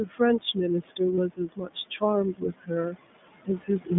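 Right through the clip, the iLBC codec squeezes everything into a narrow phone band of roughly 150 Hz to 3.6 kHz, so the speech sounds rough and a bit synthetic, which fits the 15.2 kbps mode. On top of that, noise suppressor artifacts: the room noise gets pulled down by about 20 dB between phrases, and the leftover floor pumps under the voice. The same suppressor mistakes speech for noise in four spots, 0.05 to 0.21 s, 1.29 to 2.03 s, 2.33 to 2.71 s and 3.66 to 3.91 s, dipping it by about 14 to 20 dB, so bits of speech come out swallowed and faint. Around 1.16 to 1.19 s there's a lost iLBC frame, a 20 ms gap the decoder fills with a brief buzzy held sound before the voice snaps straight back.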